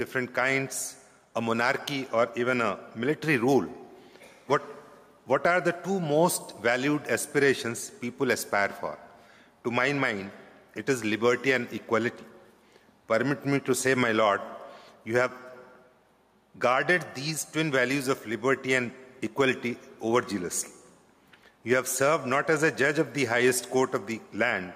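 Gain pumping runs throughout. The background swells in gaps, then ducks about 5 dB under loud sounds. Likely cause: a fast limiter on excessive gain.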